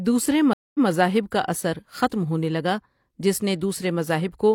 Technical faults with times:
0.53-0.88 stream reconnect

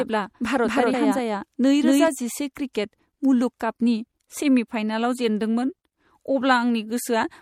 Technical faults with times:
0.00-7.41 MP3 compression
0.00-2.08 doubled audio track
0.90-0.94 damaged data in a compressed stream

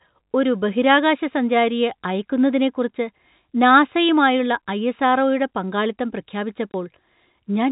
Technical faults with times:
6.72-6.74 packet loss filled with silence

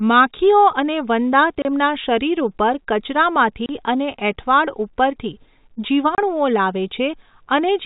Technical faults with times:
1.62-1.65 packet loss filled with silence
3.66-3.69 packet loss filled with silence
6.15-6.18 packet loss filled with silence

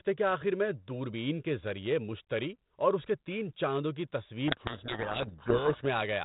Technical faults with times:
4.48-5.87 codec payload misread

